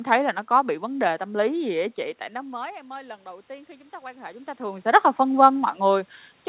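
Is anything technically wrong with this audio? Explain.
Yes. From 2.32 to 5.12 s, just after "gì á chị tại", there is automatic gain rising. The talker's level dropped by about 21 dB, so the gain control slowly added about 5 dB, lifting voice and room noise together. On a waveform, the envelope swells gradually, and on a spectrogram the noise floor brightens along with the speech.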